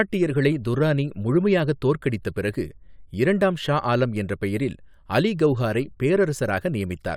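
No technical faults are audible anywhere in the speech.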